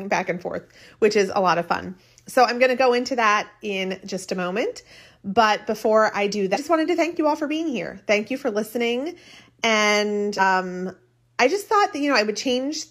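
A speech recording with damaged data in its compressed stream: bytes in two stretches were corrupt, so the decoder misread those frames, lost sync and had to hunt for the next valid frame header. Each break comes out as a short glitch. The first runs from 6.51 to 6.57 s, between "before I do" and "just wanted to thank". The second runs from 10.36 to 10.41 s.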